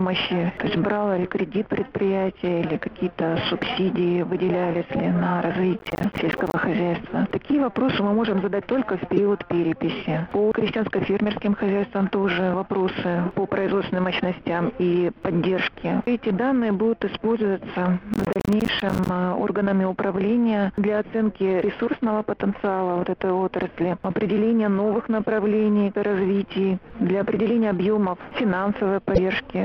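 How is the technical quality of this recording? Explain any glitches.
The recording has two kinds of glitch, each occurring twice.

From 5.79 to 6.54 s and again from 18.14 to 19.09 s there is processor overload crackle. Dozens of buffers of around 10 ms each miss their deadline and drop to silence, which sounds like gritty tearing.

At 9.16 to 9.19 s and 29.14 to 29.19 s a brief jump is heard. The likely cause is a broken MP3 bit reservoir, where a decoder missing a frame pulls data from the wrong 26.1 ms frame.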